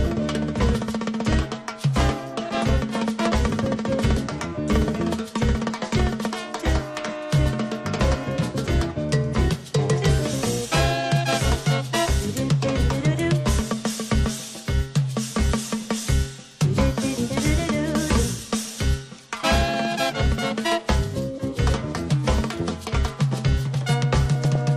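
Throughout, the sound is dull and plainly gurgling, with a granular edge. This is likely MP2 compression at a low rate, around 80 kbps. Too few bits leave upper sub-bands switched off or flickering, and the remaining bands are coarsely quantised.

DAB burbling breaks through at 2.49 to 2.61 s, 11.95 to 12.02 s, 21.11 s and 24.35 to 24.56 s. Bit errors, around 0.1 to 0.15 percent, slip past error correction. Wrong samples put short blips of noise into single sub-bands.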